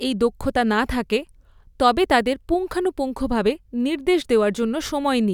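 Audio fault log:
No audible faults were found in this speech recording.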